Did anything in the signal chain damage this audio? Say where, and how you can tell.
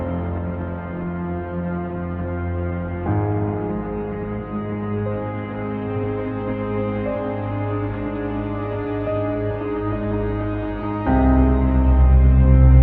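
No, nothing in the signal chain stood out as damaging this audio when I listened to it.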